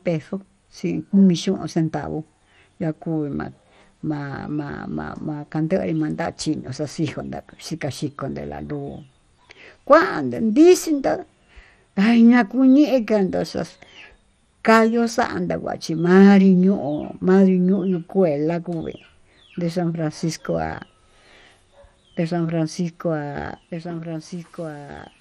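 Throughout, the speech sounds dull and gurgling, with granular distortion and nothing above 14.3 kHz, likely from MP2 compression at a low bitrate, around 64 kbps. From 23.72 s to the end, a doubled audio track appears: a dry copy about 10 dB quieter, trailing roughly one and a half seconds behind.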